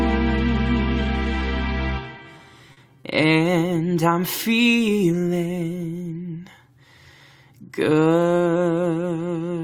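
Between 2.17 and 3.06 s there's a run of repeated stalls, a proper stutter. Packets came in late, the jitter buffer kept running dry, and four times the receiver stretched the last bit of sound to bridge the gap: 90 ms in total, the longest 40 ms. Nothing's actually lost, but it drags and hiccups.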